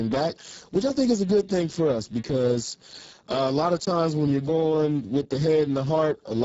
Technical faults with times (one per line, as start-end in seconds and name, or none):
0.00-6.44 Speex codec